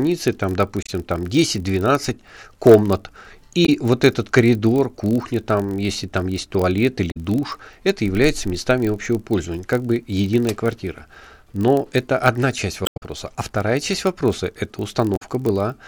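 From the first moment to the end, the speech carries a steady buzz at 43.1 Hz, the sign of a block size mismatch (padded). One stage hands over blocks slightly shorter than the 1024 samples the next stage reads, and the shortfall is filled with silence. The waveform shows a tiny dropout repeating at that rate, and a spectrogram shows faint vertical lines on a 43.1 Hz grid. Speed (0.999x) and pitch are essentially unchanged.

Damaged data in a compressed stream then causes brief chirps and blips at 0.83–0.90 s, 3.65–3.69 s, 7.10–7.17 s, 12.83–13.03 s and 15.15–15.22 s. At each, the decoder misreads corrupted frames and hunts for the next valid header. On a spectrogram these show as short broadband smears or misplaced blocks of energy, and in the waveform as abrupt discontinuities. The longest, at 12.83 s, also inserts about 78 ms of extra material.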